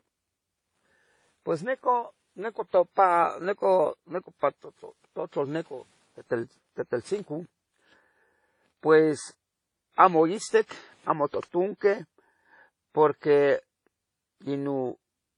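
Speech runs through the whole clip with layered lossy coding artefacts. Nothing is heard above 10.5 kHz. There is swirly smearing, and there is a metallic, phasey edge on the upper band. Both persist from start to end. Together they suggest transcoding between lossy codecs, likely an MP3 at around 39 kbit/s, then WMA at about 32 kbit/s, then HE-AAC at about 40 kbit/s. Each stage re-encoded the previous one's errors and added its own. The lowest cut-off in the chain remains.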